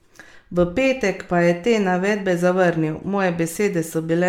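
Throughout the speech, the audio sounds swirly, smeared and hollow, with blurred consonant attacks and nothing above 19.1 kHz. This is generation loss, likely from about seven rounds of MP3 re-encoding at a rate consistent with 128 kbit/s, each pass adding fresh quantisation noise.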